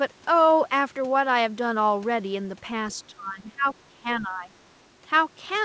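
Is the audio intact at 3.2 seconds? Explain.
No, 3.2 seconds sits inside a stretch of speech suppressed in double talk, running from about 3.07 to 3.66 s. The speech dips by roughly 15 dB there and sounds choked off in patches, likely because an echo canceller misread overlapping talk as echo and pulled it down.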